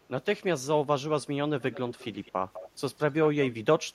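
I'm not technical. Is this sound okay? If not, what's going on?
No. Echo leak at 1.61–1.79, 1.98–2.32, 2.53–2.70 and 3.26–3.51 s: a faint copy of the voice returns about 0.2 seconds late, likely from a loudspeaker the other end's microphone picked up.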